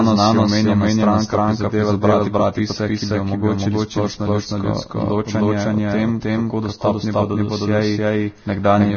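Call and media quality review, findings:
Doubled audio track, whole clip: full-band second copy of the speech trails the original by roughly a third of a second at about equal level. It is dry, with no decay or room colour, so it reads as a hard echo. Likely cause: a slower second capture path or an out-of-step edit mixing the same audio in twice.

Vorbis compression, whole clip: hissy, grainy speech, roughened tones, smeared consonant attacks, nothing above 6.6 kHz. Heavy coding damage, likely from a low-quality Vorbis encode (consistent with roughly 19 kbps). The codec lowered its cut-off and quantised the remaining treble so coarsely that fine detail became noise of similar energy.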